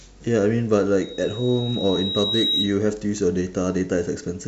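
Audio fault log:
1.01–2.81 s, loudspeaker feedback squeal: a steady tone near 3.8 kHz rises over roughly one and a half seconds to about the level of the speech. The microphone is re-amplifying its own loudspeaker output, and at that frequency the loop gain exceeds one, so the tone keeps reinforcing itself.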